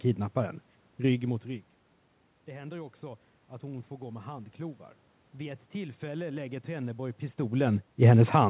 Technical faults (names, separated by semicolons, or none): automatic gain rising